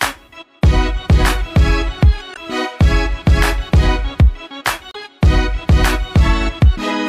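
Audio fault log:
2.31–2.37 s and 4.91–4.96 s: damaged data in a compressed stream. Corrupted frames leave the decoder misreading them and resyncing, giving brief 58 and 44 ms disruptions that show as narrow vertical smears or breaks on a spectrogram.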